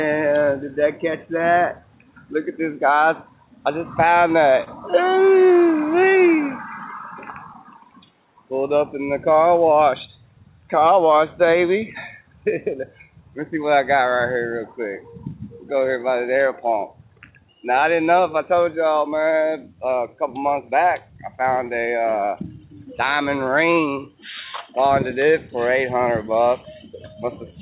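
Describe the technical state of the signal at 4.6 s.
At 4.64 s a short stall from a late packet begins and lasts until 4.69 s. A packet missed its slot and the jitter buffer ran dry. The receiver held the last sound for 25 ms, nothing was lost, and playback resumed. The sound briefly hangs with a faint buzz or dip.

This sits within clock drift between sender and receiver, present throughout. The sender's clock runs roughly 3% slow. The buffer keeps draining, so the receiver must keep patching the stream.

Those patches are repeated timing corrections, running from 0.45 s to 27.54 s at 97% speed. Short pieces are repeated, adding roughly 0.7 s overall. Each is small and unevenly spaced. If heard at all, they come across as slight hiccups or an unsteady tempo. Through the G.711 call path there is nothing above 4 kHz.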